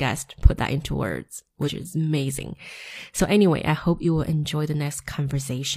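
Damaged data in a compressed stream hits this speech at 1.63–1.69 s and again at 4.00–4.06 s, each a brief glitch. Corrupted bytes there make the decoder misread frames and lose sync, so it briefly outputs garbage while hunting for the next valid frame header.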